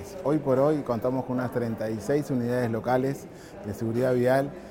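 Nothing stood out on listening; no technical fault could be heard anywhere in the audio.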